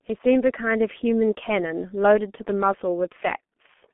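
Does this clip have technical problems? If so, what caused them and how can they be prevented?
Yes. G.723.1 codec damage runs through the whole clip. The speech is squeezed into a narrow telephone band of roughly 200 Hz to 3.4 kHz, with nothing above 3.8 kHz, so it sounds muffled. The heavy hoarseness and smeared consonants point to a very low bitrate, around 6 kbit/s, where the coder updates its voice model only every 30 ms frame and misses fast detail. To prevent this, record or transmit over a wideband codec at a higher bitrate.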